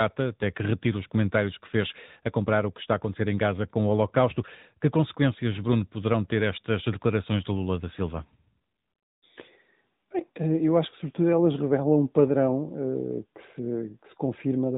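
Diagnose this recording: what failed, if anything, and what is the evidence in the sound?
The failure is at the codec stage: the whole speech recording has passed through the AMR narrowband mobile codec. The band stops hard at 3.8 kHz from start to finish, and the coding damage is plainly audible, with a synthetic, buzzy edge that points to a mid-rate mode around 10.2 kbps. AMR-NB resamples to 8 kHz and rebuilds the voice from a vocal-tract model excited by a few pulses in each 5 ms subframe. On a spectrogram this shows as an empty region above a flat ceiling and smeared harmonic detail below it.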